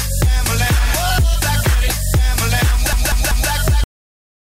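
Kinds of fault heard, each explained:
Repeated frames: A stretch of compressed audio was sent again, so a 192 ms block plays three extra times from 2.93 to 3.50 s, a stutter adding 576 ms.
Cut-off end: The final buffers were never written, so at 3.84 s the sound stops mid-sound and drops straight to digital silence with no natural decay.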